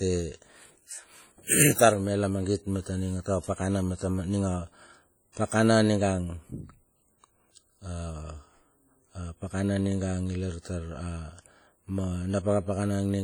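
Throughout the speech there is heavy codec damage: a ringing, washy smear around each syllable and a hiss that swells and fades with the level. The likely cause is WMA compression, its long transform blocks spreading quantisation noise, which fits a bitrate near 32 kbps.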